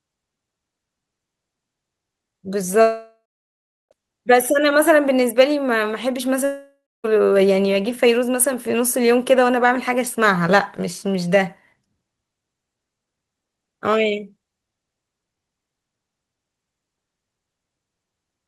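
Speech, with two gaps where the audio simply stops arriving, most likely a long network dropout each time. From 2.81 to 3.93 s about 1.1 s goes missing: the last sound smears into a fading buzz, then roughly 0.72 s of near-silence before speech resumes further on. The same happens from 6.45 to 7.06 s, losing about 0.6 s, with roughly 0.27 s of dead air after the concealment tail dies away.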